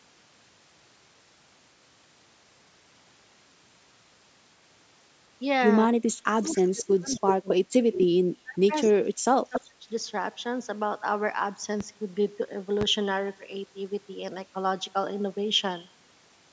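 From 5.87 to 7.73 s the speech drops by up to around 30 dB in patches as the other side talks over it, likely speech suppressed in double talk, where an echo canceller ducks the near talker along with the echo. Unlike a network dropout, the gaps follow the overlap. Within that stretch, at 6.48 to 6.68 s and 7.14 to 7.54 s, and just after it at 7.93 to 8.05 s, a delayed copy of the speech returns about 265 to 271 ms late. This is likely echo leak, a loudspeaker echo the canceller failed to remove, ranging from about 20 dB down to only about 5 dB below the speech. Its fixed delay sets it apart from room reverberation. Suppression returns at 8.42 to 8.73 s and 8.91 to 9.91 s, dipping up to about 25 to 30 dB, with further echo scraps at 8.84 to 8.90 s and 9.54 to 9.66 s, delayed 274 and 277 ms. At 11.81 to 11.84 s and 12.81 to 12.85 s, single loud pops land about 10 and 15 dB above the speech, likely voltage steps from a switch or glitch. 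They are brief thumps over continuing speech rather than clipping or dropouts.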